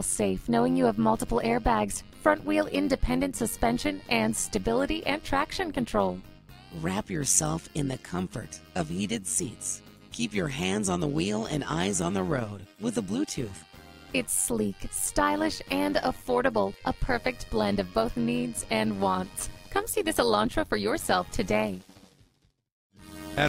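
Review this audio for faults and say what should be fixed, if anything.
Overlap-add ripple runs through the whole clip: the level swells and dips by about 11 dB roughly a hundred times a second, once per frame, because the windowed frames were overlapped at a spacing whose windows don't sum to constant gain. Unlike deliberate tremolo, the rate is locked to the frame hop. To prevent it, pair the analysis and synthesis windows with a hop size that satisfies the constant-overlap-add condition.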